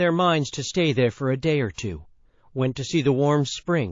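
Throughout, the speech sounds watery and dull, with swirling treble and smeared consonants. This is likely MP3 compression, at a low bitrate near 32 kbps. At 1.74 to 1.78 s, pre-echo appears. A hiss about 19 dB up leads an attack by 41 ms, because the encoder kept its long blocks.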